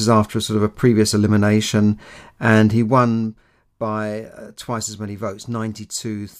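Right after "a previous elimination and", from 2.73 to 3.29 s, there's zipper noise. The level drops by about 10 dB over roughly half a second, but it moves in discrete jumps at around 100 per second rather than gliding down. Each jump leaves a tiny click, so you hear a fine buzzy ticking riding on the speech while the gain falls. It clears by "by uh twice as", once the level settles.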